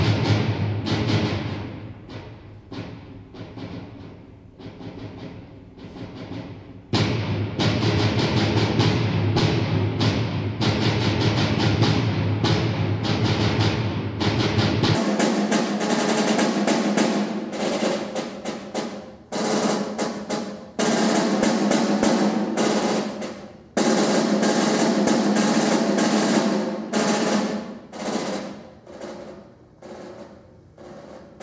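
From 0.0 to 14.95 s, a wrong sample rate: audio recorded at 32 kHz plays back at 16 kHz, so it runs at half speed and drops a full octave, sounding slow and low.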